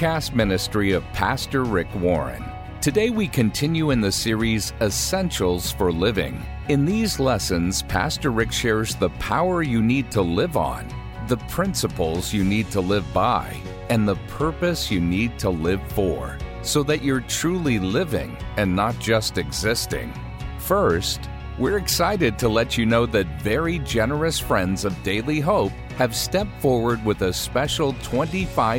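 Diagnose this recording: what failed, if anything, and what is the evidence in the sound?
Nothing failed in this recording, and the sound offers no evidence of a fault at any stage.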